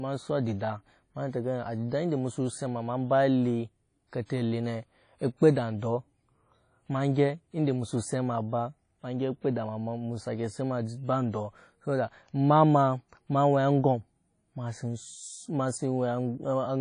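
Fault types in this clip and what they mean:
WMA compression: throughout, the speech carries a ringing, washy smear with hiss that swells and fades alongside the voice, and nothing reaches above 10 kHz. This fits a transform codec likely running near 32 kbps, where coarse quantisation spreads noise across long blocks and zeroes faint spectral detail.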